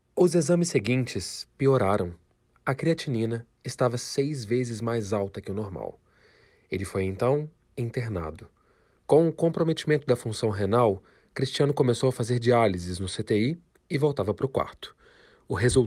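No technical faults are audible.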